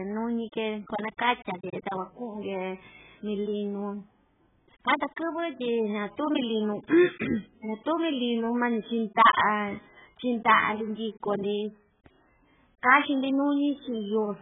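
Speech, and it's been squeezed hard the whole way through: nothing above about 3.8 kHz, so it sounds dull, with a smeared, warbly fizz on sustained sounds and sibilants. That's likely heavy AAC compression, consistent with AAC-LC at around 8 kbps.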